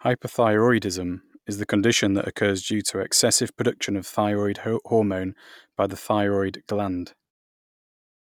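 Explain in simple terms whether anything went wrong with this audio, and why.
Nothing went wrong with this recording. Around 7.3 s the speech is gently faded out at the end, the way an editor would deliberately finish a clip.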